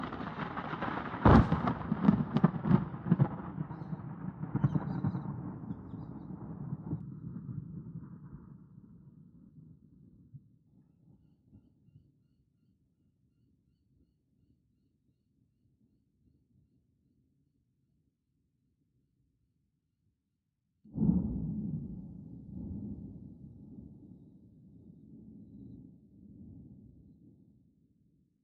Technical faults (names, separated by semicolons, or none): channel delay (comb filtering)